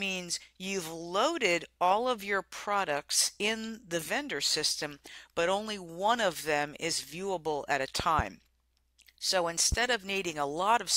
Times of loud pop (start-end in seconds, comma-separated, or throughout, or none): 8.00-8.22, 9.72-9.75